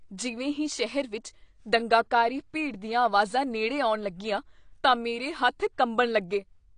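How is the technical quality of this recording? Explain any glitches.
Technical quality is limited by one fault that runs through the whole recording: plainly audible AAC compression. Nothing reaches above 9.8 kHz, so the speech sounds dull and lacks air, and sibilants and sustained sounds have a warbling, fizzy texture. The likely cause is AAC-LC coding at a low rate, which fits a bitrate around 32 kbps. The encoder drops high-frequency lines and coarsely quantises the remaining bands, leaving gaps and smearing that shift from frame to frame. A plain low-pass filter would sound dull but stay clean and steady, without that swirling texture.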